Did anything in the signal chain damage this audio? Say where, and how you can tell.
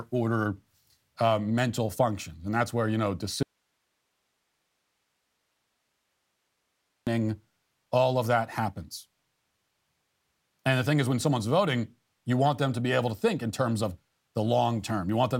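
Yes, an audio dropout to a faint residue after "that's where you know": 3.43 to 7.07 s is just hiss, roughly 50 dB down. That's likely a loose analogue connection with the preamp still live.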